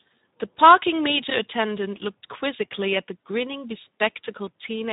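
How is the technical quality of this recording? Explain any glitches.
The technical quality is poor. Two faults are audible.

Speex codec damage runs through the whole clip. The sound is hoarse and noisy, which fits Speex at about 11 kbps, with too few bits for the excitation.

Hard clipping occurs from 0.64 to 0.74 s. The signal overdrives a stage by about 3 dB, so the peaks are cut flat and add a brief crackle.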